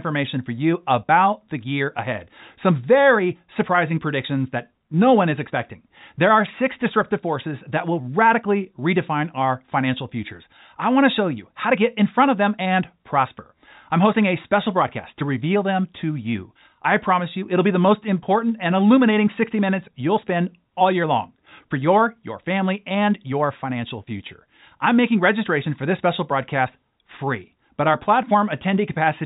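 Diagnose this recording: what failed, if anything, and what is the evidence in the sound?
Nothing failed; the telephone-band speech shows no faults.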